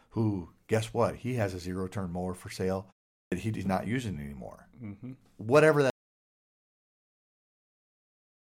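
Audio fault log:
3.24–3.32 s, clipped start after a pause: after "turn mower for sale" and a 0.4 s gap, "he is not using" begins abruptly, its first 77 ms swallowed while the output device wakes.
5.9 s to end, audio dropout to silence: the speech cuts off mid-flow into dead digital silence with no room tone, likely because the input was lost while recording continued.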